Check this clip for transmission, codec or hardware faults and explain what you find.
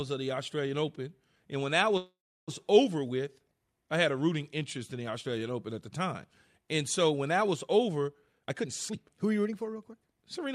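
Two faults are audible in this speech clip: a call audio freeze early on and a jitter buffer speed-up near the end.

From 1.97 to 2.50 s, right after "when that", the speech stops and is replaced by a continuation of the last sound that fades into about 0.33 s of silence. This is a call audio freeze, likely from packets stalling in transit until the jitter buffer ran dry. The receiver filled about 0.50 s and then resumed at "over with I had", so nothing is lost, but everything afterwards arrives about 0.50 s later. On a waveform the envelope decays into a flat stretch. A spectrogram shows smeared, fading harmonics followed by an empty band.

From 8.22 to 10.01 s, after "when that was over", the speech plays at about 127% of normal speed while the pitch stays unchanged, so it sounds hurried. This is a jitter buffer speed-up. The buffer was holding more audio than its target, so the receiver trimmed many short pitch-period slices, removing roughly half a second in total. 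A spectrogram shows syllables packed closer together with unchanged harmonic spacing. The waveform shows unchanged periodic cycles with tiny splice points.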